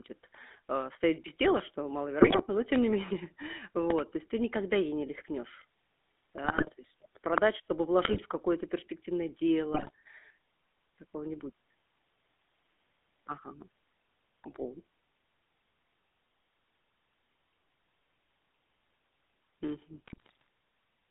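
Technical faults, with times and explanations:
Throughout, GSM full-rate codec: buzzy, gravelly speech confined to 200 Hz–3.6 kHz, consistent with 13 kbit/s GSM pulse-excitation coding that discards fine detail.
2.22–2.43, 6.44–6.72, 8.05–8.25, 9.74–9.90 and 20.06–20.48 s, GSM bit errors: squawks and gargling as corrupted filter, pitch and gain values distort frames.
7.38–7.40 s, loud pop: a single sharp pop about 25 dB above the speech, likely a voltage spike from a switch or static discharge.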